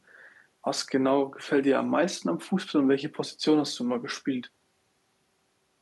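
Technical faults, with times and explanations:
Nothing stood out on listening to this speech recording that would count as a technical fault.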